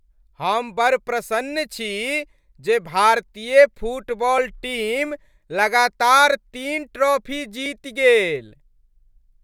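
At 4.38 s, and again at 7.66 s just after "तीन ट्रॉफी", the speech drops to a block of digital silence under a millisecond long, which fits a 32-sample buffer left unfilled. The hard, unfaded edges make a sharp tick rather than an audible gap.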